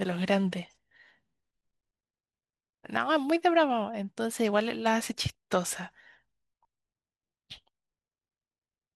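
Throughout, the speech sounds dull and granular with a gurgling edge, likely MP2 compression at a low rate near 80 kbps, dropping upper sub-bands and coarsely quantising the rest. From 5.13 to 5.52 s and again from 7.50 to 7.58 s, DAB burbling adds short blips of noise as uncorrected bit errors, around a few tenths of a percent, corrupt the audio data within single sub-bands.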